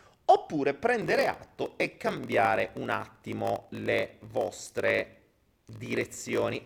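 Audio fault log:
1.0 s to end: block size mismatch (padded). Each block arrives short and is topped up with silence, giving a 46.9 Hz buzz and speech slowed to 0.938 times speed with its timbre kept, which fits 1024-sample reads. The waveform shows regular short gaps, and the spectrogram shows evenly spaced vertical stripes.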